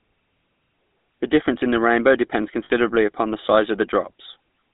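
Speech run through the GSM full-rate codec, which gives it a buzzy, gravelly roughness and a narrow band of roughly 200 Hz to 3.7 kHz, consistent with 13 kbps GSM. On a spectrogram, nothing appears above 3.7 kHz, and the harmonics look smeared and coarse. From 2.64 to 2.71 s, lost GSM frames are concealed by repeating the last good frame. This produces a brief metallic ring of about 60 ms, which fits three lost 20 ms frames. On the spectrogram it shows as a frozen band, and on the waveform as a short repeating pattern.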